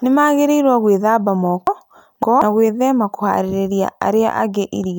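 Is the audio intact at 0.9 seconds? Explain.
Yes, at 0.9 seconds the speech plays through cleanly, with no dropout, click, distortion or other fault to be heard at that point.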